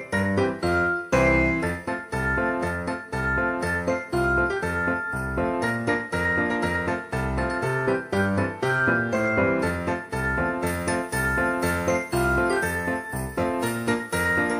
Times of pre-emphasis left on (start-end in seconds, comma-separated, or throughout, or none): 10.67-14.59